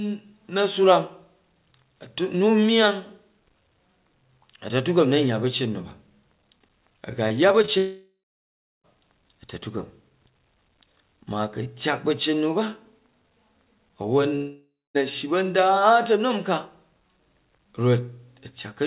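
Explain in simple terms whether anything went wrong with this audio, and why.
Yes, two kinds of fault.

Repeated packet loss (robotic sound) runs from 7.28 to 7.70 s. Four tiny holes, none longer than about 21 ms, are patched by repeating the last sound. That makes the speech choppy and robotic rather than silent, which sets it apart from a dropout.

Long network dropout happens at 7.78 to 8.86 s and again at 14.36 to 14.97 s, most likely from the connection stalling. Each starts with a fading buzz or hiss, then silence (about 0.7 s the first time, 0.26 s the second). The speech resumes with that stretch simply gone, not stuttered.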